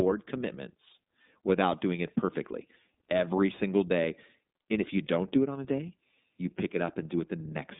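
From start to finish the speech runs through the iLBC codec, cut off at 3.7 kHz with 30 ms frames coded independently, so it sounds narrow, slightly rough and synthetic.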